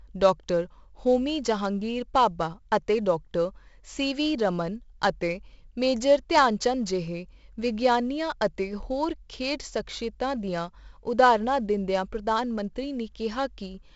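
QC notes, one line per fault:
Throughout: 4-bit ADPCM compression. The coder keeps each sample only as a coarse 4-bit step away from its prediction, and the step size adapts too slowly for this heavily damaged speech, so quantisation error rides along with the level as a gritty hiss on every loud syllable, roughened further where sharp onsets outrun the step. Nothing remains above 7.7 kHz, and the 64 kbps stream points to a 16 kHz sample rate, which dulls the top end.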